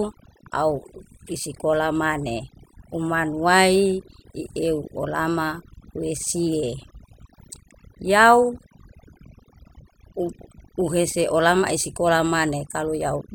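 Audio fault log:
Throughout, overdone noise removal. A noise reduction stage was pushed too hard on this speech. Narrow frequency bands sitting near its noise estimate are cut deep or shut off entirely. The softer parts of the speech fall below that line and vanish with the noise. Between phrases the background drops, dotted with twinkling specks where stray bands flicker on and off.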